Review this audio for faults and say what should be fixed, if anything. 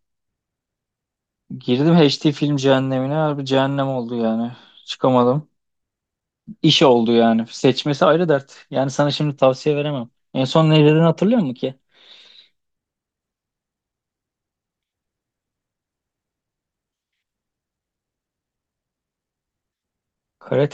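From 11.27 to 13.16 s there is a drift correction step. The speech runs 5.26% fast and 88.7 cents sharp, then snaps back. The cause is likely clock-matching software changing playback rate in one jump. Unlike wow, the shift holds steady rather than wavering. To prevent it, correct clock drift with continuous fine-grained resampling instead of single large rate steps.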